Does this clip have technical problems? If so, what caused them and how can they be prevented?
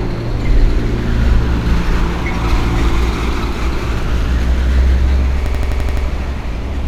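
Yes. From 5.46 to 6.06 s there is a system hang loop. The machine or its audio driver stalled while the sound hardware kept replaying the same ring buffer, so one 85 ms slice repeats seven times at about 11.7 Hz, a machine-gun stutter that fits a 4096-sample buffer. On a waveform this shows as identical copies of one block in a row, and on a spectrogram as the same pattern stamped at regular 85 ms intervals. It can be prevented by giving the audio thread real-time priority and keeping drivers stable so the buffer is always refilled.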